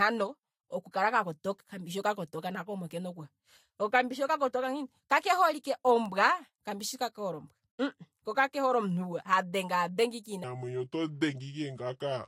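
From 10.44 s to the end at 12.28 s, there's a section at the wrong speed: the speech drops to 0.735x, slowing and sinking roughly five semitones, likely from a wrong-clock playback.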